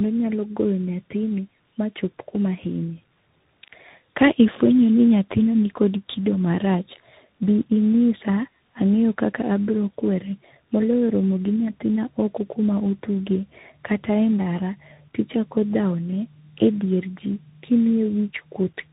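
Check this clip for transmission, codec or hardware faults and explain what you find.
There is one fault, and it runs through the whole clip: tandem speech coding. The speech sounds as if it passed through two speech coders in a row. The character of the damage suggests a G.729A stage at 8 kbit/s, followed after a G.711 A-law hop by a CVSD stage at 64 kbit/s. Each border decoded the audio and re-encoded it, so the second coder was working on output the first had already roughened. Nothing is heard above 3.8 kHz, which makes the speech muffled. On top of that sits a warbly, gritty texture. Stacked coders compound each other's errors, so the result sounds worse than any single low-rate codec. One codec alone would give less of this layered roughness.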